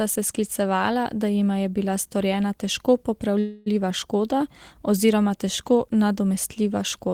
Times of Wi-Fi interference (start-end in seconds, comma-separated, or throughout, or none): none